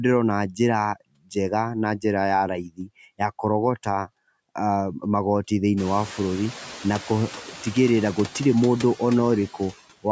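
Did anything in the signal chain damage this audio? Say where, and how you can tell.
Yes. The damage comes from the call processing stage, specifically the noise suppressor. It pulls the background down by about 13 dB throughout, deciding frame by frame what counts as steady noise. The residual noise dips between phrases and swells back under the speech.

The same stage also causes speech cut by the noise suppressor, at 1.13–1.36 s and again at 2.64–2.9 s. Both times it mistook quiet speech for noise and dropped it by up to about 22 dB, for a short stretch of roughly 150 ms and 200 ms, so those moments sound swallowed and faint.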